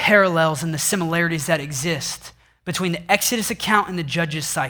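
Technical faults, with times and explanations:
Throughout: clock drift between sender and receiver. The sending side's audio clock runs slow, by roughly one and a half percent. Speech arrives a little too slowly for the receiver's playback. Its jitter buffer keeps draining. To avoid running empty, the receiver has to stretch the stream again and again. The result is small, uneven timing hiccups spread across the whole of this speech clip, never settling into a steady rhythm.
0.12 to 4.35 s: repeated timing corrections. Across this stretch the receiver keeps repeating short slivers of sound to make up for the slow sender. Every edit pushes the same way, lengthening the audio. Playback runs at about 99 percent speed, and around 50 ms is added in total. The repeats land at irregular spacing. Each is tiny, so they come across as faint stumbles or a slightly unsteady pace.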